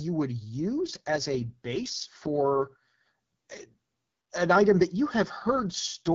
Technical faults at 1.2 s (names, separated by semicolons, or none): AMR rate drop